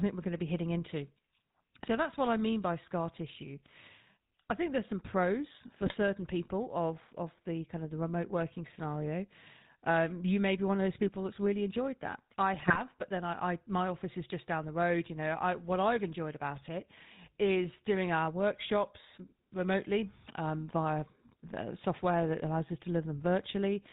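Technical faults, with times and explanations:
Throughout: GSM full-rate codec. The speech passes through a vocal-tract model driven by regularly spaced pulses, leaving a buzzy, gravelly roughness that is plainly audible. A spectrogram shows nothing above 4 kHz and coarse, smeared harmonics in the band below.
5.86 to 5.97 s and 12.54 to 12.81 s: GSM bit errors. Corrupted filter, pitch and gain values bend the spectrum and jolt the level, so the speech breaks into squawks, pops and gargling. The waveform shows abrupt level spikes, and the spectrogram shows distorted, blotchy frames.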